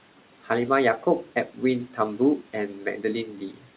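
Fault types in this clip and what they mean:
Speech cut by the noise suppressor: Near the end of the clip, between 3.36 and 3.65 s, the speech turns faint and swallowed, with parts of it dipping by as much as about 12 dB for around 150 ms in total. The suppressor mistook these quieter stretches for background and turned them down along with the room noise, so the trailing sounds lose their edges instead of tailing off naturally.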